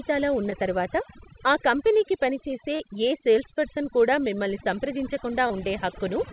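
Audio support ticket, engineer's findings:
Overdone noise removal, whole clip: background pulled down and broken into twinkling specks; soft tails eaten. Suppressor set too aggressive, gating individual bands near its noise estimate along with low-level speech.

Differs from codec damage: the band limit at 4 kHz is from the G.711 mu-law call leg, which is a clean ceiling, while these artefacts are shimmering and level-dependent, present at every quiet moment rather than at fixed points.

Short concealed packet loss, 0.50–0.53 s, just before "తరువాత ఆ కంపెనీకి పనిచేసే": brief smear, about 14 ms of synthesized fill. Gap fits one lost 20 ms packet.

Same fault, 2.75–2.81 s, between "తరువాత ఆ కంపెనీకి పనిచేసే" and "ఏ సేల్స్పర్సన్ కూడా మిమ్మల్ని": longer wobble, about 39 ms bridged, consistent with two consecutive 20 ms packets. Third at 5.47–5.52 s: brief smear, about 23 ms filled.

Tells apart from the suppressor: isolated, time-locked events with a pitch-continued or noise-like patch, not continuous shimmer.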